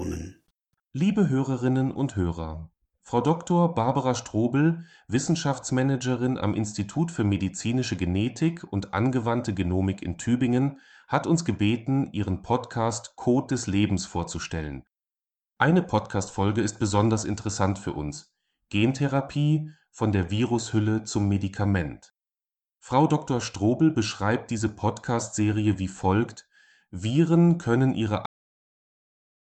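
A speech clip with a cut-off end: right after "können ihre", at 28.26 s, the sound stops mid-sound and falls to digital silence that lasts to the end, because the final buffers were never written. Unlike a fade-out, there is no decay, and unlike a dropout, nothing resumes.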